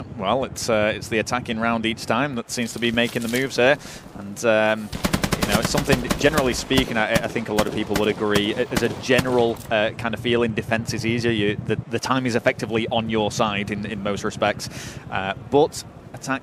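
At 6.23 s a corrupt frame was decoded: one damaged compressed frame, played anyway, puts misplaced energy into a brief glitch peaking near -20 dBFS.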